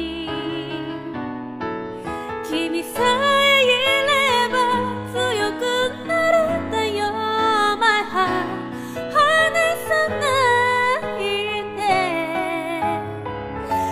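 No technical faults are audible.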